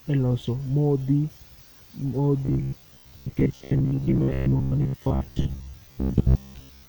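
From about 2.45 s right through to the end, the speech takes on that robotic sound you get from repeated short buffers. The voice collapses into a stiff, metallic buzz pinned at about 66.8 Hz, still loosely tracking the words. That buzz rate points to roughly a 15 ms chunk being looped. The likely cause is new audio arriving too slowly, so the software keeps replaying its last short buffer, and most of the real audio is skipped.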